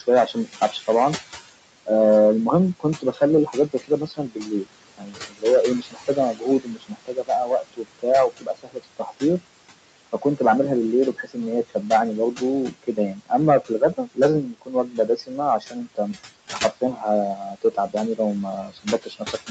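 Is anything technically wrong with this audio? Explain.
Yes. The speech has three problems: hard clipping throughout, noise suppressor artifacts throughout, and stretches where the noise suppressor cuts into the speech itself.

Hard clipping runs through the whole clip. Some stage in the chain received a signal about 9 dB hotter than it could carry, so the loudest peaks were sliced flat. Only a small share of the waveform, on the order of one or two percent of samples, hits that ceiling. Each flattened crest throws off upper harmonics, so louder syllables carry a brittle crackle or rasp instead of clean transients.

Noise suppressor artifacts are also present from start to finish. The suppressor estimates the steady background and pulls those bands down by about 21 dB on a frame-by-frame basis. Between phrases the room tone sinks away, then swells back up beneath each burst of speech.

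Speech cut by the noise suppressor shows up in three stretches: 0.0 to 1.25 s, 2.8 to 9.41 s, and 11.13 s to the end. Here the suppressor mistook parts of the voice for noise and attenuated them along with it. In the first stretch the dips are brief and reach about 15 dB. In the middle one, roughly three seconds in total are affected, with drops of about 22 dB. The last stretch dips by about 21 dB. Soft consonants and word tails sound swallowed or faded.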